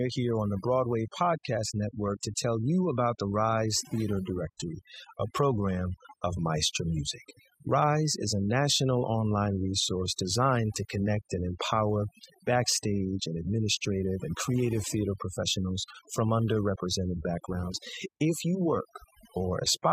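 Overdone noise removal runs through the whole speech clip. A noise reduction stage set too strong is cutting individual frequency bands whenever they sit near its noise estimate. Quiet parts of the voice vanish with them. Pauses fall to near silence with twinkling specks.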